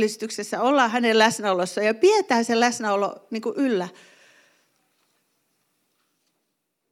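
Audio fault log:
Nothing to log here; this bit of speech came through without a single fault worth writing down.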